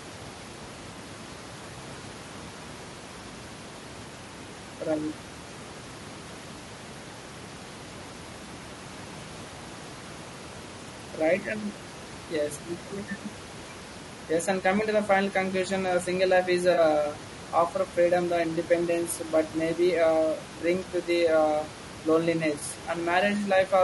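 Throughout the speech there is a rough, grainy texture, with noise filling the gaps between harmonics and a thin, synthetic-sounding top band. That is the signature of low-delay AAC compression, likely AAC-ELD at a bitrate around 32 kbps. Its short frames resolve pitch harmonics coarsely, and the bit budget runs out at this rate. Room noise sits about 20 dB below the speech. AAC frame loss with concealment occurs at 0.93–0.96 s, 16.73–16.79 s and 22.59–22.62 s. Each time, one or two frames of about 20 ms went missing, and the decoder patched the gap from the previous spectrum. The result is a brief smeared, noisy blip, about twice as long at 16.7 s.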